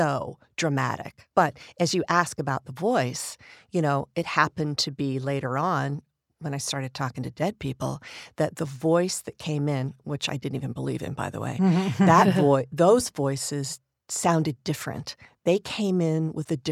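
Nothing in the speech here calls for comment, as there isn't a single technical fault to point to at any moment in the recording.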